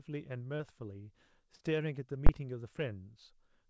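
A short speech recording carried over a call link, with nothing above 8 kHz as the G.722 path would give, shows two kinds of fault. Short concealed packet loss appears at 0.56 to 0.62 s and again at 1.55 to 1.62 s: about 40 ms of audio arrived too late, and the receiver bridged roughly 35 ms by extending the preceding sound. Each gap is heard as a brief smeared wobble. Invalid numbers at full scale strike at 2.27 to 2.29 s. A computation produced non-finite values that were clamped to the maximum, so a 23 ms block, which fits a 1024-sample processing block, is pinned at one extreme value far beyond the speech peaks. It is heard as a single loud bang, and the waveform shows a flat slab held at one extreme while the spectrogram shows a bright broadband vertical stripe.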